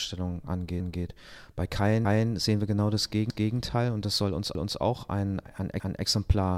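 At 2.05, 3.30, 4.55 and 5.80 s the speech stutters. These are overlapping chunks: each 1.0 s chunk starts 250 ms before the previous one ends, so a quarter-second of speech plays twice at every join, giving a regular, clipped repeat.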